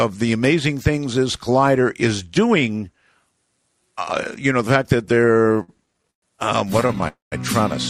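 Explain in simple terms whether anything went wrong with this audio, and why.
Towards the end there's some repeated stalls (stutter). From 5.05 to 6.24 s the audio catches eighteen times, the longest hold about 0.12 s, and again from 6.68 to 7.04 s with eight tiny catches. Packets kept arriving late, so the player stretched the last sound to cover. Nothing's lost, but it drags.

Right after, at 7.08 s, there's a call audio freeze lasting about a quarter second, most of it near silence, before things pick up again at 7.34 s exactly where they left off. The likely cause is packets held up in transit, leaving the receiver with nothing to play.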